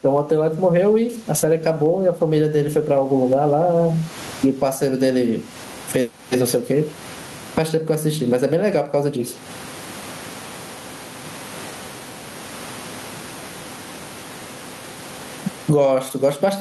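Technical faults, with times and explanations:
Throughout, gain pumping: the input gain is likely set far too high for the microphone, so a fast limiter or compressor keeps clamping down whenever the speech gets loud and lets go in the pauses. The level swings by roughly 25 dB. The room noise sits about 39 dB below the speech, and the speech itself sounds squashed, with loud and soft passages pressed close together.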